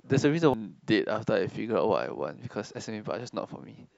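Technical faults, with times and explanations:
0.54 s, damaged data in a compressed stream: a short blip cuts into the speech at this point. Part of the coded stream arrived corrupted, with bytes lost, zeroed or overwritten, so the decoder could not read that frame correctly. It lost sync and scanned forward for the next valid frame header before normal decoding resumed. That disruption is what makes the momentary blip.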